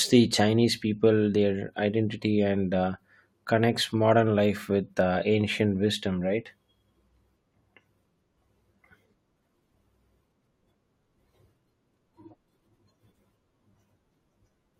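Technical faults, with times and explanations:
Nothing stood out as a technical problem on listening to this speech recording.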